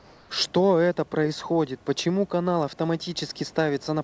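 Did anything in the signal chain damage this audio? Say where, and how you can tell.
Yes. Comfort noise in place of the background fills the opening 0.00 to 0.30 s, at the call-processing stage. Before the speech starts, the room tone, sitting about 30 dB below the loud parts, gives way to a steady, featureless hiss about 2 dB quieter. That is likely discontinuous transmission: the sender's voice detector heard no speech and stopped sending, and the receiver synthesised shaped noise until audio resumed. The band stops at 8 kHz, which fits a G.722 call codec.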